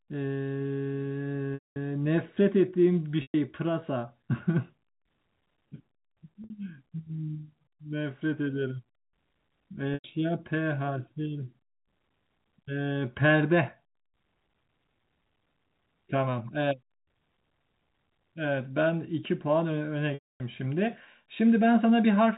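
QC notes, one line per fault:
1.54–1.76 s, 3.22–3.34 s, 6.44–6.50 s, 9.94–10.04 s, 20.14–20.40 s: packet loss with pitch repetition. Gaps run 60 to 260 ms. The receiver repeats the last pitch period, so short gaps buzz briefly. Longer ones fade to silence before speech cross-fades back.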